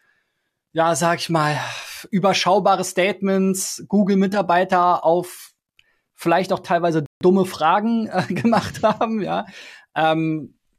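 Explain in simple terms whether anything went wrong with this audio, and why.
Something did go wrong, once. Right after "vielleicht auch teilweise", at 7.06 seconds, the speech stops dead and goes silent until 7.21 seconds. That is a rebuffering stall. The player ran out of downloaded audio and waited for more. Then the speech picks up exactly where it stopped. Nothing is skipped, but 150 milliseconds of silence is added.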